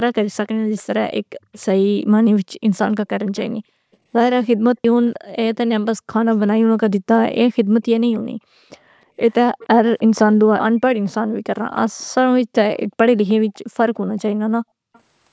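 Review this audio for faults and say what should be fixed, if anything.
A faint echo leak trails the speech at 0.46–1.66 s, 2.74–3.97 s, 5.06–5.55 s, 9.31–10.01 s, 11.11–12.06 s, 13.28–13.33 s and 14.93–15.0 s. It is a copy of the speech arriving 311 ms late and sitting about 30 dB below it, rising to about 25 dB below at 9.31 s and 13.28 s and falling to about 35 dB below at 14.93 s. The far end is likely playing the call on a loudspeaker, and its echo canceller is letting part of that playback back into the microphone. Room reverberation also adds a late copy, but it smears continuously into each syllable. This copy is a distinct, fixed-delay repeat that comes and goes in patches. To prevent it, the far-end device should use a headset, or its echo canceller should be given a properly aligned reference and tuned to converge fully.

Background gated by the echo canceller shows up between 7.7 and 8.44 s. 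The room tone drops by as much as about 40 dB, for around 150 ms in all, while the loudspeaker is active, then recovers once the canceller releases its suppression. A noise gate would cut in whenever the local signal fell quiet. This dip instead follows playback activity. A network dropout would silence everything, but here only the background drops. To prevent it, the canceller's residual suppression should be softened, or comfort noise should be added to fill the gap.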